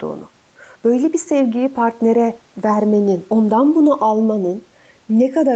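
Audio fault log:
throughout, channels drifting apart: the two sides run on clocks roughly 100 ppm apart, so their offset creeps toward 0.4 ms, giving a slow flanging sweep in mono.
throughout, gain pumping: the gain swings by roughly 5 dB, ducking under louder sound, likely from overhigh gain hitting a fast limiter.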